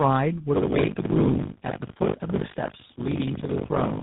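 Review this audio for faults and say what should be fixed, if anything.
Tandem speech coding runs throughout: the speech passes through three separate speech codecs, ending in GSM full rate, with nothing above 3.8 kHz. Each coder re-encodes the previous one's damage, so the result sounds rougher and more warbly than a single codec would. Prevent it by keeping the call in one codec end to end, or by using transcoder-free operation at network borders.

Buffer tearing runs from 0.54 s to the end as a 50 Hz buzz, which fits a 20 ms period. Roughly a third of each buffer replays audio from about 70 ms earlier, with hard joins. Unlike mains hum, it stops in silence. Prevent it by keeping the writer and the hardware reader locked, with enough headroom that the write position never crosses the read position.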